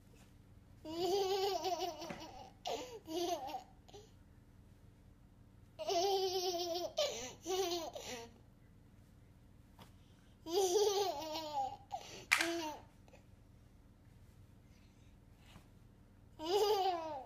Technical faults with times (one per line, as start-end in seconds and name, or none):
2.35 DC step